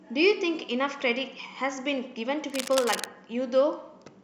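From 2.50 to 3.06 s, cable scratch noise rides over the speech: dense, uneven crackling and rustling only slightly below the speech level. This is likely a worn cable or connector being moved, its contact resistance fluctuating rapidly and injecting irregular noise bursts.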